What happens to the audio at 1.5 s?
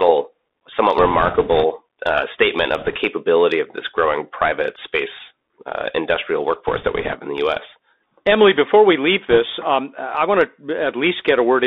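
At 1.5 s the Bluetooth voice link is suffering bit errors, from 0.98 to 1.64 s, with roughly a few percent of the CVSD bits flipped. Each wrong bit nudges the waveform the wrong way by one step, which grows with the speech level, and the mistake fades as the decoder adapts, so there is no sharp click, just a rushing, crackly noise layered over the speech for that stretch.

Underneath, the Bluetooth CVSD headset codec is present throughout. It sends one up-or-down bit per sample at 64 kbps, adapting its step size as it goes, and the line is limited to about 250 Hz to 3.7 kHz. The result is a thin, narrowband sound with granular hiss, scratchy sibilants and plainly audible distortion on loud high-frequency content.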